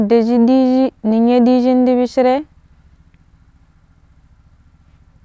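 Speech recording with no audible technical faults.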